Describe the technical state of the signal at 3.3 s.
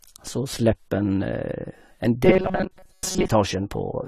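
At 3.3 s the sound is just emerging from a stretch of robotic sound from repeated short buffers, which runs from 2.25 to 3.28 s. Throughout that span the speech becomes a rigid, metallic buzz at 188 Hz, still loosely following the syllables. This is likely caused by audio arriving too seldom, so the playback loops a tiny slice of about 5.3 ms, a length set by that buzz rate. Most of the real audio in the span is skipped. Unlike a general metallic tone from heavy processing, the buzz holds one fixed pitch however the voice moves.

Underneath, for the whole clip, there is plainly audible AAC compression. The high-frequency cut-off is lowered, and the top end sounds dull, with a smeared, warbling fizz on sibilants. The likely cause is an AAC-LC encode at a low bitrate, consistent with something around 32 kbps, where the encoder trims the bandwidth and starves bands of detail. Unlike a simple low-pass filter, it leaves a watery, swirling texture in the bands that remain, not just a clean loss of treble.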